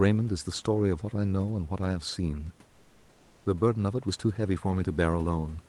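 This speech clip likely passed through Opus discontinuous transmission, so from 2.69 to 3.45 s (about 760 ms) comfort noise replaces the background: the room noise, about 37 dB below the loudest speech, gives way to a steady, featureless hiss at the same level until speech resumes.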